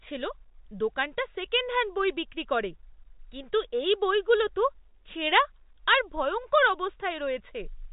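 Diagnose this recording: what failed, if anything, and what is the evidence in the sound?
Nothing failed: the speech passes through the telephone path intact, band-limited to 4 kHz as G.711 telephone coding dictates, with no disturbance anywhere in the recording.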